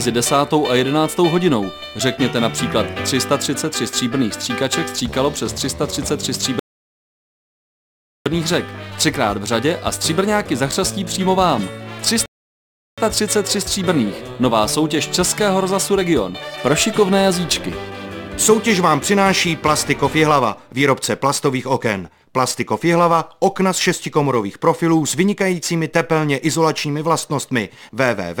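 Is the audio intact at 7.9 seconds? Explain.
No. A rebuffering stall runs from 6.59 to 8.26 s, so 7.9 s falls inside a gap of silence. The player ran short of downloaded audio, halted playback, and waited for more data before continuing. The sound cuts out abruptly, then picks up exactly where it stopped, with nothing skipped. No content is lost, but the stall inserts about 1.66 s of dead air into the timeline.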